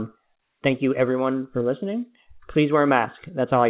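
Nothing stood out on listening to this speech, which comes through a G.711 A-law call path at 64 kbps with nothing above 4 kHz.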